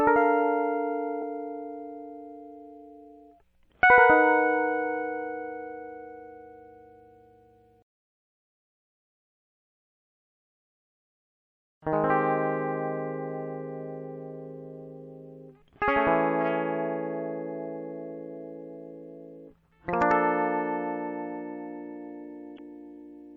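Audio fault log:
throughout: MP3 compression. The music sounds watery and swirly, with the treble dulled above a fixed cut-off, metallic chirps on bright sounds and smeared attacks. This is likely a low-bitrate MP3 encode, around 64 kbps, where weak frequency lines are zeroed and flicker on and off between frames.
1.21 s: damaged data in a compressed stream. A brief glitch, about 16 ms long, breaks into the music. Corrupted bytes in the compressed data made the decoder misread the frame there, lose its place and resync at the next frame header.
22.55 to 22.60 s: damaged data in a compressed stream. A short glitch of about 48 ms, heard near the end. Again the decoder hit bad data, could not read those frames properly and searched for the next frame header to regain sync.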